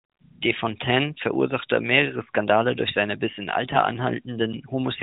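From 3.68 to 3.79 s, AMR bit errors corrupt the stream: roughly one bit in twenty in the less protected part of the frames arrives flipped, and the span fits about four 20 ms frames. The checksum on the critical bits still passes, so the decoder trusts bad data, misplacing excitation pulses and mis-setting fine pitch, gain and spectral values. Pitch and level hold roughly steady, but the sound turns briefly hoarse, scratchy and gargly within the light narrowband coloration of the AMR-NB codec.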